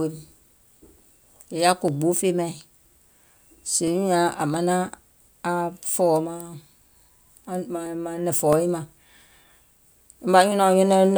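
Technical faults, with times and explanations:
0.56–10.52 s, clock drift buffer slips: regular clicks every 0.66 s in the speech, around fifteen of them, likely two clocks roughly 500 ppm apart.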